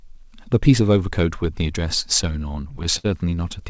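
From 2.22 to 3.06 s the speech stutters with repeated stalls. Packets arrived late, so the jitter buffer kept running dry. Seven times the receiver held the last sound, 122 ms in total, the longest hold 58 ms. Nothing is lost, but the passage drags.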